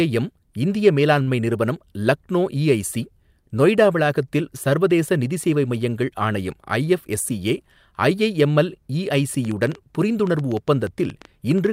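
At 1.23 to 1.29 s there is a short stall from a late packet. The speech holds for about 38 ms, then resumes without loss.

From 9.13 s to the end comes a train of clicks. About seven irregular clicks per second tick above the speech, likely from nearby interference.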